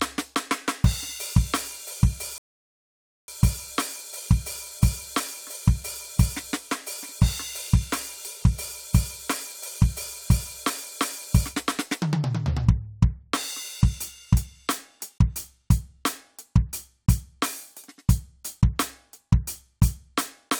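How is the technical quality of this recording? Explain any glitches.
The music has one glitch. A rebuffering stall runs from 2.38 to 3.28 s: playback used up its downloaded audio and waited for more. The music drops to silence for about 0.9 s, then resumes exactly where it paused, with nothing skipped and the time simply added.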